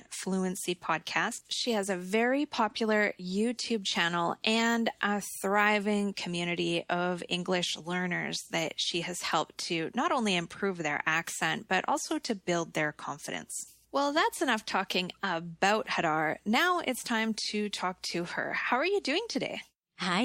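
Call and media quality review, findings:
No audible faults found across the clip.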